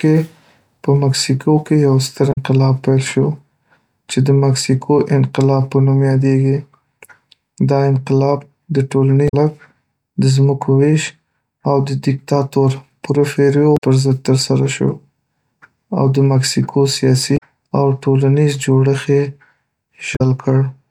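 Damaged data in a compressed stream breaks the speech five times, each for roughly 80 to 90 ms: 2.29 to 2.38 s, between "مکسیکو کې یو ستر" and "پیل شو"; 9.25 to 9.34 s; 13.74 to 13.82 s, just before "پر ضد ترسره شو"; 17.34 to 17.43 s, after "او د مکسیکو"; and 20.13 to 20.21 s. At each point corrupted bytes make the decoder misread frames and lose sync until it finds a valid header. The result is a brief chirp, squawk, click or short hole.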